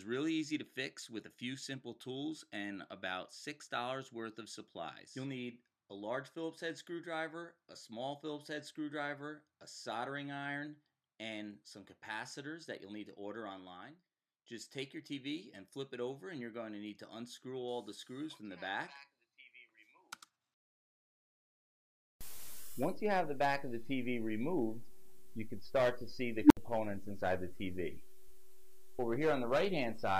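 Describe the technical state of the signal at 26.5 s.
At 26.5 s the signal is inside an unstable filter fault running from 26.43 to 26.57 s. A recursive filter's output diverges: a tone of roughly 300 Hz swells over about 77 ms into clipping, overflows, then drops to silence for about 67 ms until the filter resets.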